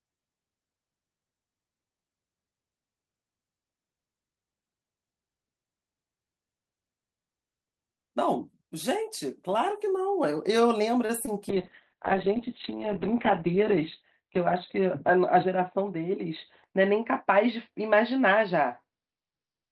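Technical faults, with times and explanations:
11.05–11.11 s, short stall from a late packet: A packet arrived behind schedule and the jitter buffer ran dry, so the receiver extended the last sound for 37 ms until the packet came in, then resumed from the same point. Nothing of the speech is lost, but one sound is held unnaturally long with a faint buzzy or dipping quality, and playback from here on sits 37 ms later than before.
11.26–11.29 s, short concealed packet loss: About 20 ms of audio never reached the decoder in time. The receiver covered the hole by continuing the preceding sound, pitched if voiced and as shaped noise if not, for 13 ms, then blended back into the real signal. The result is a brief smear or wobble, and any short consonant falling in that window may simply disappear.
11.50 s to the end, call bitrate drop: The bandwidth estimate fell and the encoder was pushed from 48 kbps down to 6 kbps, staying at the lowest rate for about 1.4 s. 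At that rate Opus codes far more coarsely and narrows the audio band from 20 kHz to 4 kHz. The speech turns audibly rougher and watery, and it loses its upper frequencies, giving a muffled, telephone-like sound.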